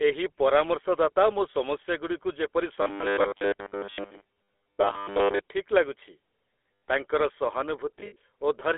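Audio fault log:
throughout GSM full-rate codec: a buzzy, gravelly roughness sits on the speech and nothing is heard below 300 Hz or above 3.4 kHz, pointing to the 13 kbps full-rate coder, whose pulse-driven excitation gives a grain that plain band-limiting or MP3 smearing lacks.
8.00–8.16 s lost GSM frames: about 100 ms of frames drop out, scattered over 160 ms, which fits roughly five 20 ms frames, the longest run under a tenth of a second. Each gap is filled by repeating the last good frame, giving a rough metallic ring rather than a clean silent dropout.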